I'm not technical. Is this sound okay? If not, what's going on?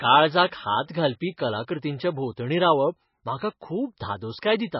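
No. The recording was likely squeezed hard by MP3 compression, which saves space by discarding detail. Throughout the speech, everything above about 5.6 kHz is gone, so it sounds dull and muffled, and the heavy squeezing adds a watery, swirly texture, especially on s sounds.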